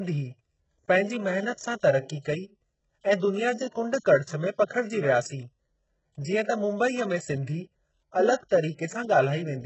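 The whole speech clip has a heavily processed top end, likely HE-AAC compression at a very low bitrate, around 8 kbps. Nothing reaches above 8 kHz, and the upper band sounds rebuilt rather than real, with a gritty, metallic edge. Pre-echo shows up at 2.19–2.25 s, 3.99–4.05 s and 8.49–8.51 s. In each spot a short hiss of block-wide quantisation noise arrives just ahead of a sharp attack and softens it.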